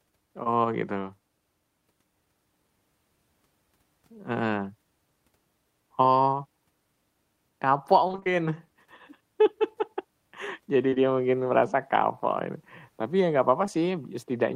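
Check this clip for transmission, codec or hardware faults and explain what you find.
The speech in this clip has packet-loss damage of two kinds, both from the network path.

Short concealed packet loss occurs at 0.43 s, at 10.90 s and 10.94 s (two back-to-back holes just before "mungkin merasa kapok ini"), and at 13.66 s just after "ya nggak". Each time about 20 ms of audio failed to arrive, and the receiver bridged it by extending the preceding sound before blending back. It comes across as a brief smear or wobble. On a spectrogram the harmonics run on unnaturally flat for that instant, and in the waveform the cycles repeat almost identically.

Repeated packet loss (robotic sound) runs from 8.07 s to 8.28 s. Over those 0.2 s, about five separate gaps, the longest 22 ms, were each patched by continuing the last sound, so roughly half the stretch is synthetic fill. The result is a choppy fragment with pieces missing. 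A spectrogram shows a comb of frozen, stair-stepped harmonic slices, and the waveform shows repeated copied cycles with small seams where real audio resumes.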